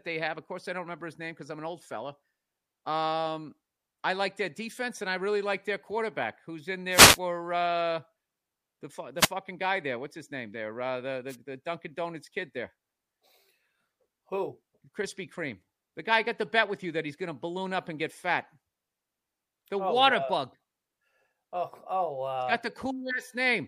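Speech marred by three wireless microphone noise hits: 6.90–7.19 s after "who's in", 9.18–9.29 s before "guy there", and 11.29–11.36 s. Each is a short static swish as the FM radio link fades. A spectrogram shows brief broadband vertical smears, and the waveform shows hashy noise.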